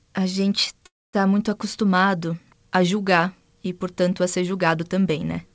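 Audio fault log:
0.86–1.16 s, call audio freeze: after "a gente" the speech stalls, briefly carrying on the last sound as a fading buzz before roughly 240 ms of silence, and then resumes cleanly with "muito acostumado a julgar". The likely cause is late packets draining the jitter buffer. Unlike packet loss, no speech is cut out. About 274 ms of filler is inserted, so everything afterward lands that much later. The band stays capped near 8 kHz, consistent with G.722.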